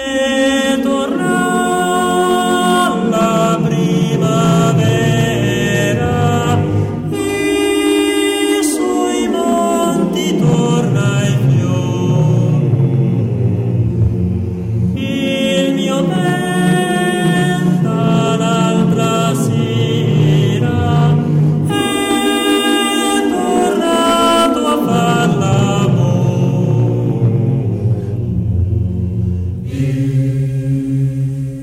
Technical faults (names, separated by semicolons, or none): hard clipping